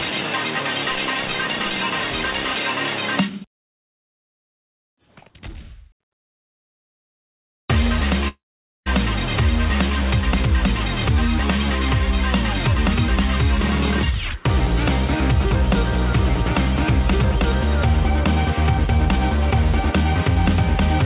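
At 8.28 s the sound smears into a fading buzz, then drops to near silence until 8.88 s, losing about 0.58 s of audio, likely a long network dropout.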